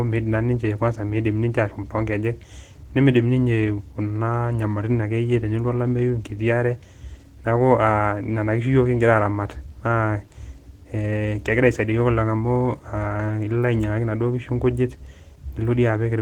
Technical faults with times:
0.00-16.21 Opus voice compression

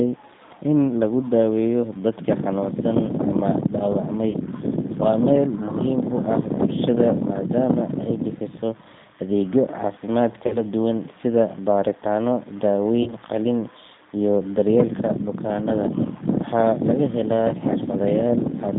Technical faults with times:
0.00-18.79 G.729 codec
4.31-4.37 VoIP packet loss concealed by the speech codec
10.47-10.62 VoIP packet loss concealed by the speech codec
13.03-13.14 VoIP packet loss concealed by the speech codec

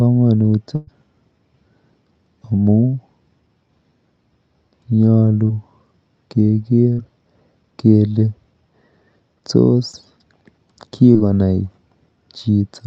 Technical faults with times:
0.75-0.89 burst of packet loss
5.47-5.51 short concealed packet loss
6.93-6.99 short concealed packet loss
9.91-9.95 short concealed packet loss
11.13-11.17 short concealed packet loss

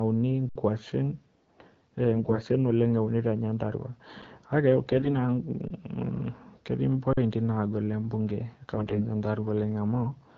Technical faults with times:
0.49-0.55 underrun with held sample
2.15-2.39 AMR bit errors
4.22 underrun with held sample
4.91-5.11 AMR bit errors
5.68-5.70 underrun with held sample
7.13-7.17 underrun with held sample
8.75-9.04 AMR bit errors

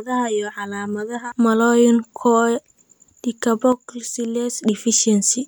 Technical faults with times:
3.72-4.58 one channel drops out

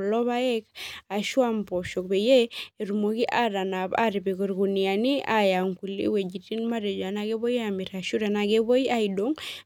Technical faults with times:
none

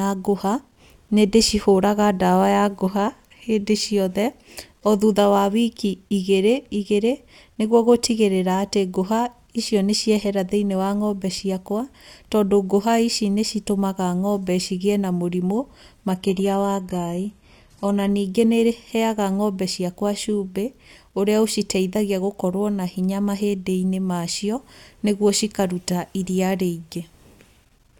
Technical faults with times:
16.10-18.10 adaptive stream at a lower bitrate

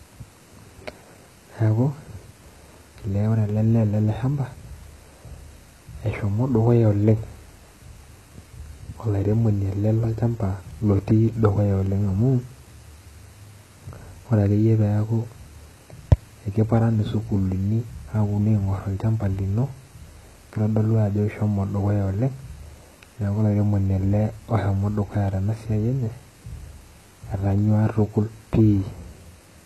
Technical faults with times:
0.00-29.65 HE-AAC compression

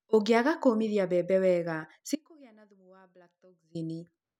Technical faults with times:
2.15-3.75 audio dropout to a faint residue

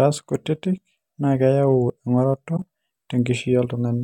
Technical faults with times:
2.56-2.59 corrupt frame concealed

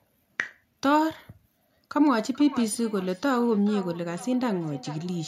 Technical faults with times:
2.02-5.28 feedback echo between two devices

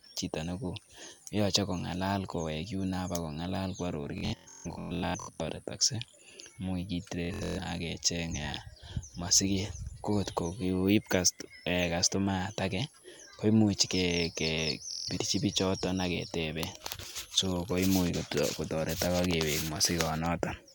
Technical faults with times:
4.18-5.40 Bluetooth stutter
7.25-7.59 Bluetooth stutter
14.91-15.09 Bluetooth stutter

